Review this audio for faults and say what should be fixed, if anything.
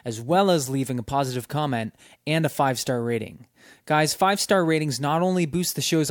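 No faults were found; nothing needs fixing.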